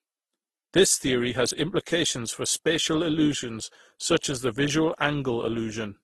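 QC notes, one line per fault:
Throughout: transcoding between lossy codecs. Nothing in the speech reaches above 12.2 kHz, and two layers of damage sit on top of each other. A smeared, low-rate coarseness fits a very low-bitrate Opus pass, and a second, finer swirl fits a later Vorbis encode at a moderate rate, likely from re-encoding. The Vorbis stage spends bits re-coding the earlier artefacts instead of the speech. Unlike a single lossy encode, two distinct artefact textures are heard at once.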